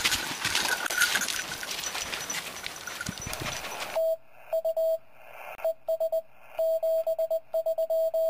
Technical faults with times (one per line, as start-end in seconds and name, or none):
5.55-5.59 digital broadcast dropout